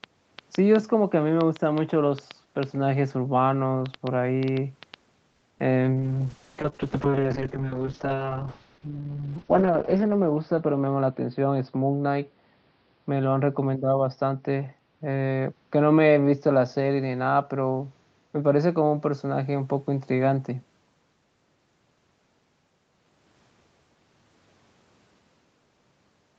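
Speech over an Opus call path is marred by several faults. A train of clicks runs from 0.04 to 4.95 s: about 20 similar pops at an irregular pace averaging 3.5 per second, some peaking roughly 10 dB above the speech and ticking through the pauses as well. Repeated impulses of the same shape like this most likely come from electrical interference or a faulty connection or power supply injecting pulses into the signal. A call audio freeze follows at 5.31 to 5.44 s. The receiver held the last sound and let it fade as a buzzy continuation for 110 ms, which likely means delayed packets left the jitter buffer empty. When the audio resumed it picked up where it stopped, so a gap was inserted and nothing was lost. Almost immediately after, a short concealed packet loss at 5.58 to 5.61 s leaves a brief smear: about 20 ms of audio never arrived, and the decoder covered 10 ms of that by extending the preceding sound before blending back. 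A call bitrate drop then spans 5.95 to 20.67 s. The encoder falls from 32 kbps to 6 kbps and stays at its lowest for about 3.9 s. The coarser coding makes the speech rough and watery, and the audio band narrows from its usual 8 kHz top to 6 kHz, dulling sibilants. Inside that stretch, a jitter buffer speed-up at 10.63 to 11.57 s plays the audio at about 112% speed without changing pitch. The receiver trimmed roughly a tenth of a second of pitch-period slices to shrink an overfull buffer, so the delivery sounds briefly hurried.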